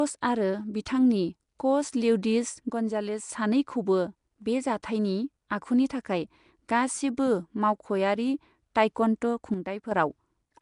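Speech, and the first thing you notice is a rough, hissy, somewhat underwater quality running through the whole clip, with nothing at all above 10.6 kHz. The codec damage is plainly audible, and the character is likely Nellymoser compression, the old Flash microphone codec. At a fixed two bits per sample, quiet bands get no bits and are filled in with noise, which is where that halo and smearing come from. The sound points to a rate somewhere around 44 kbps. There are two places where the level abruptly sinks by about 6 dB and then comes back: from 2.70 to 3.29 s, and again from 9.54 to 9.91 s. Nothing else about the sound changes during those stretches, just the drop. That's the classic signature of one channel dropping out of a stereo source that carried the same material on both sides, so the mono sum loses half its level. That's the likely explanation here. Finally, at 4.83 s there's a bit of pre-echo: a short smear of hiss, about 10 ms long, just ahead of a sharp attack. 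A transform codec spreads its quantisation noise across a whole block, so when a loud onset lands late in the block, noise scaled for that loud part leaks into the quiet moment before it, and the attack comes across softened.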